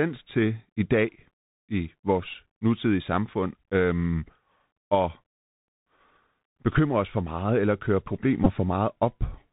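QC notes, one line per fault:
Throughout, Bluetooth CVSD headset codec: the speech is band-limited, with nothing getting through above about 4 kHz. The s sounds come out scratchy, there's a grainy hiss under everything, and louder bright bits break up where the one-bit step can't keep pace. All of that points to a 64 kbps CVSD headset link.
8.44–8.49 s, Bluetooth headset packet repeated: a short buzzy patch of about 15 ms, where the headset looks to have lost packets and replayed the last good one. Repeating every 3.75 ms gives a brief tone near 267 Hz, which fits about four repeats in a row.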